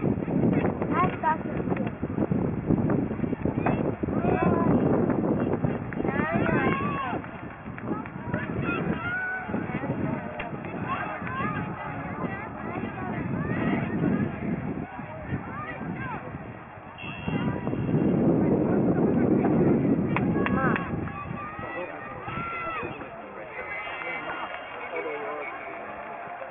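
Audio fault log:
Throughout, aliasing: high content turns gritty and metallic, with false tones that bear no relation to the sound and a spectrum packed hard against a ceiling near 3 kHz. The stray components sit roughly 15 dB below the wanted signal. The audio was taken down from a higher rate, which fits a new rate of 6 kHz, without first removing what lay above 3 kHz, so that energy folded back into the band.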